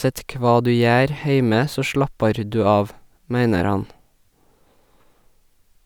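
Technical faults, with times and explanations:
No technical faults can be heard in this speech recording.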